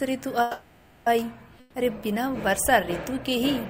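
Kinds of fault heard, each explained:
Call audio freeze: From 0.41 to 1.08 s the sound stalls and the last sound is stretched and fades for about 650 ms, likely because delayed packets left the jitter buffer empty. Playback then resumes where it stopped, with nothing lost but everything after arriving 650 ms later.
Burst of packet loss: At 1.60 to 1.76 s roughly 140 ms of audio is dropped. The receiver holds the preceding sound and lets it decay over the gap, then playback jumps ahead, so that stretch of the original is missing.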